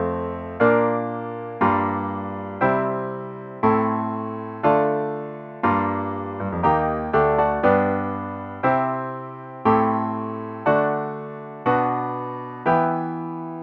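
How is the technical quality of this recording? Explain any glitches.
Nothing glitchy turns up here; the recording just rolls along with no dropouts, clicks or other hiccups to point to.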